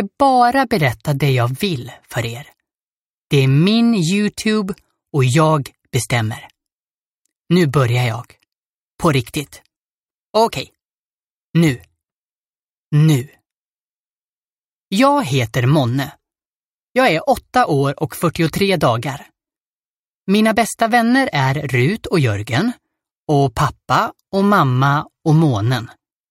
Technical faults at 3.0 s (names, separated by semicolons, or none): none